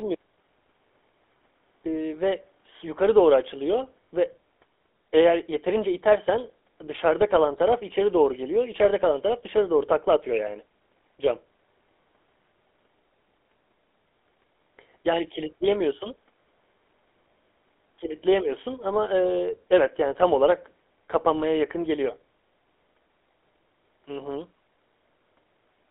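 From start to finish the speech carries the damage of the GSM full-rate codec. It rebuilds the voice from a vocal-tract model fed by a sparse, regularly spaced pulse excitation, giving a buzzy, gravelly roughness that is plainly audible here. The line band of 300 Hz to 3.5 kHz fits a rate of about 13 kbps. On a spectrogram, energy stops sharply near 3.5 kHz and thins below 300 Hz, and harmonics look smeared and grainy.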